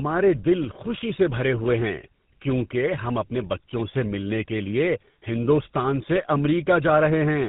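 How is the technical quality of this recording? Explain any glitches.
The quality is poor throughout because of one fault: tandem speech coding. From start to finish the speech passes through a lossy speech coder twice in a row. The rough, buzzy character fits GSM full rate at 13 kbit/s, with a 64 kbit/s G.711 link in between. The second coder re-encodes the first coder's already damaged output, so the errors stack. The speech sounds rough, muffled and warbly. On a spectrogram, nothing appears above 3.8 kHz, and the harmonics look smeared and unstable.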